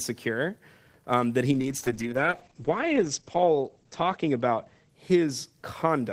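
Right after "um that he", at 1.52 s, there's a call bitrate drop that lasts to the end. The sound turns rough and muffled, with everything above 8 kHz gone where it reached 20 kHz before. That fits the encoder falling from about 32 to 9 kbps.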